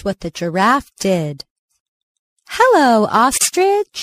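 Speech, carrying MP3 compression throughout: the encoder has likely run short of bits, at a level that fits a rate around 64 kbps, so the treble is cut off and weak frequency lines flicker in and out between frames, leaving the speech plainly watery and swirly, with metallic chirps on s sounds and smeared onsets. At 3.38 to 3.41 s there is a gap at a join of encoded pieces, where separately encoded segments were spliced without trimming encoder delay and padding. This drops roughly 34 ms of silence, with smeared edges, into the continuous speech, which then resumes where it stopped.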